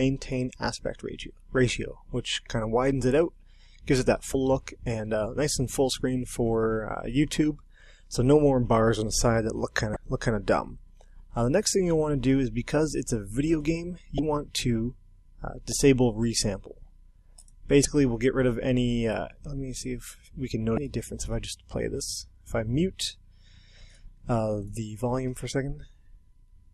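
Damaged data in a compressed stream at 4.31–4.35, 9.93–9.96, 14.16–14.19, 17.82–17.85 and 20.74–20.78 s: corrupted bytes make the decoder misread those frames and lose sync until the next frame header, giving a short chirp or blip of about 30 ms each time.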